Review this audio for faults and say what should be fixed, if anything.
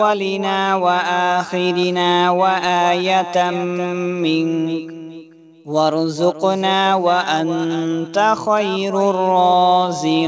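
No faults; nothing needs fixing.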